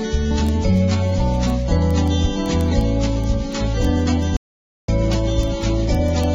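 At 4.37 s the input signal was likely lost, with the recorder continuing to write silence until 4.88 s. This audio dropout to silence lasts about 0.52 s: the sound cuts off abruptly, the gap holds dead silence with no room tone, and the audio resumes mid-flow.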